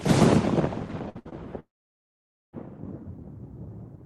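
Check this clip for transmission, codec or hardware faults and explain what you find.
The clip has three kinds of network fault, all packed between about 1.09 and 2.55 s.

Two bursts of packet loss come first, at 1.09 to 1.17 s and 1.19 to 1.27 s. Each time roughly 60 ms of audio failed to arrive, and the receiver bridged it by extending the last sound while turning it down. You hear a short held, fading stretch, and then the audio jumps ahead. On a spectrogram each gap shows as a smeared band of repeated, flattened harmonics or noise. The waveform shows a decaying envelope before a clean restart.

A short concealed packet loss follows at 1.29 to 1.34 s, where about 20 ms went missing. The decoder synthesised a brief continuation, about 24 ms long, and cross-faded back into the real signal. It comes across as a quick smear or wobble right after the two bursts. On a spectrogram it is a thin vertical blur. 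The waveform shows a slight discontinuity in shape rather than a gap.

A long network dropout runs from 1.60 to 2.55 s, likely a stall in the connection, with about 0.94 s of audio lost. Concealment briefly stretches the last sound, which fades within a few hundredths of a second. After that, roughly 870 ms is essentially silent until the audio resumes further along. On the waveform this is a flat, near-empty stretch. A spectrogram shows a dark gap preceded by a short fading smear.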